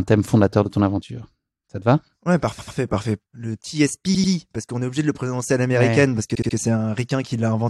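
Speech with three bursts of repeated frames, where a short block of compressed audio plays again, giving a stutter. At 2.58 to 2.77 s and 4.14 to 4.32 s, a 92.9 ms block repeats twice more. At 6.34 to 6.55 s, a 69.7 ms block repeats three more times. On a spectrogram or waveform, each burst shows identical back-to-back slices, and the clip runs about 0.6 s longer.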